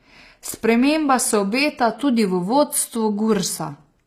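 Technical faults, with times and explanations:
Throughout: HE-AAC compression. The upper frequencies have a synthetic, gritty, metallic quality, and the s sounds come across lispy. The likely cause is HE-AAC coding at a low bitrate, around 24 kbps by the sound of it. Only the lower spectrum is coded directly. The treble is regenerated by copying lower bands upward under a coarse envelope, so its harmonics do not align with those below the crossover, and the damage is plainly audible.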